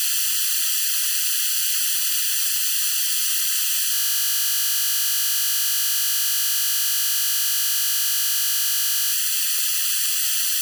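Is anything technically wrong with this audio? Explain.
Yes, there are two faults.

Throughout the clip there is channel delay with comb filtering. One channel reaches the mono mix late by a fraction of a millisecond, roughly 0.7 ms. When the two copies are added, content common to both cancels at regularly spaced frequencies, with the first notch around 700 Hz and further notches stacked above it. The result is a fixed hollow, phasey colouration across the whole sound.

From 3.94 s to 9.13 s there is a system hang loop. The host or its driver stalled, but the audio hardware kept reading the same ring buffer, which is consistent with a buffer about 20 ms long. That single 20 ms fragment therefore repeats exactly, over and over, for more than five seconds. At this short length the repeats merge into a steady, rigid buzz at 50 Hz, and the sound only resumes once the system recovers at 9.13 s.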